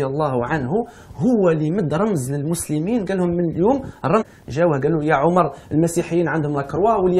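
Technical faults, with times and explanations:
4.21–4.23 s, stream segment skipped: the sound jumps abruptly forward with a brief blip and no gap of silence, likely because one segment failed to load and the player went straight to the next. Unlike a dropout, nothing pauses. The content simply leaps ahead.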